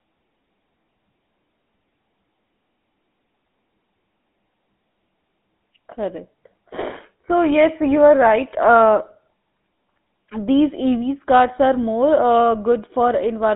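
Across the whole recording, the speech has passed through the GSM full-rate codec. The encoder reduced the voice to a vocal-tract model driven by evenly spaced pulses, keeping only a coarse sketch of the excitation, at a rate that points to the 13 kbps full-rate mode. The line carries roughly 200 Hz to 3.6 kHz, so the sound is thin and boxy, and the codec damage is plainly audible as a buzzy, gravelly roughness.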